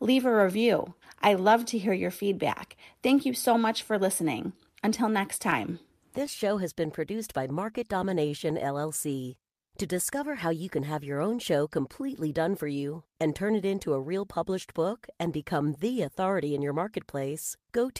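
Clock drift between sender and receiver runs through the whole speech clip. The sender's clock is slower than the receiver's by roughly one and a half percent, so the jitter buffer keeps draining. Unlike random network loss, the trouble never pauses and always pushes the same way.

Repeated timing corrections follow from that drift, from 0.12 s to 17.21 s. The receiver stretches the audio by inserting short repeated pieces, playing at 99% speed and adding roughly a fifth of a second overall. The result is a faintly dragging, unevenly paced tempo with slight hiccups at irregular spacing.

Scattered short gaps appear from 5.50 s to 7.77 s and again from 12.20 s to 16.67 s: a few isolated holes in each stretch, none longer than about 10 to 15 ms. Each is patched by extending the preceding sound and heard as a brief tick or smear. These are local dropouts, not the steady one-way pull of the drift corrections.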